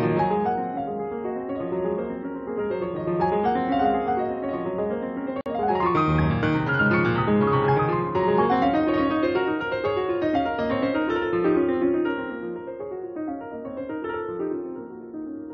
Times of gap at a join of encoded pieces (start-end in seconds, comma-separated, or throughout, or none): 5.41-5.46